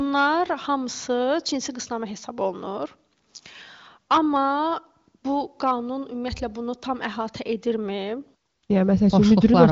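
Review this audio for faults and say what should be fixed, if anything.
Nothing needs fixing in this speech clip. It has passed through the AMR wideband (HD Voice) codec: the sound stops around 7.5 kHz, and the coding leaves at most a faint trace, which fits one of the codec's highest rates, near 23 kbit/s.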